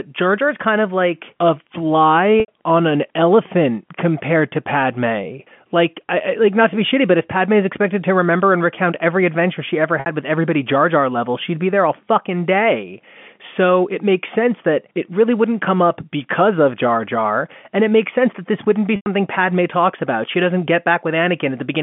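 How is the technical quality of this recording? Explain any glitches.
Three short dropouts from packet loss with pitch repetition, heard through a narrowband telephone path (150 Hz to 3.4 kHz, G.711 mu-law at 64 kbps). They occur at 2.40 to 2.48 s (80 ms), just before "on an elephant compared"; 10.00 to 10.06 s (60 ms), between "every adventure she ever" and "with everybody"; and 18.96 to 19.06 s (100 ms), after "that this wouldn't be". The receiver filled each gap by repeating the last pitch period, which fits losses of three to five 20 ms packets. Each gap sounds like a brief held, buzzy tone that fades before speech resumes.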